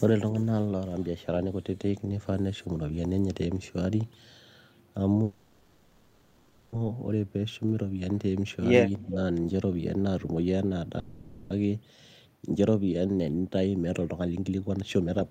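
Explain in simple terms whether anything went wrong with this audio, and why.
Two call audio freezes happen here, most likely because packets were held up on their way and the receiver's jitter buffer ran dry. Instead of going silent, the receiver stretched the last bit of sound into a fading buzz until the data arrived. The first runs from 5.23 to 6.75 s, about 1.5 seconds of filler; the second from 10.99 to 11.53 s, about half a second. The speech then picks up exactly where it stopped, so nothing is lost, only delayed.

Around 9.05 to 9.17 s the speech is suppressed in double talk, likely because both people spoke at once and the echo canceller could not tell this talker from the echo of the other side. It turned the sound down to be safe. Here the effect is brief and mild: a slight dip in loudness, adding up to well under a tenth of a second.

From 13.07 to 15.22 s a jitter buffer speed-up kicks in. 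After the delays, the receiver was holding more audio than it wanted, so it caught up by snipping out many tiny slices of the speech. The voice keeps its normal pitch but plays at 125% speed, sounding rushed, with about half a second trimmed away in total.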